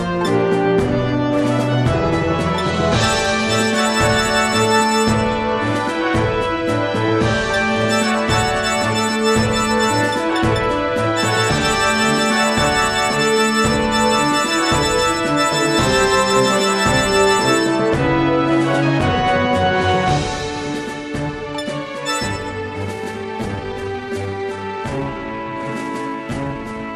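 From 22.92 s to the end, the audio suddenly slows to about 0.74 times its pace, a time-stretched section, likely software stretching; the pitch doesn't drop, unlike a slowed playback.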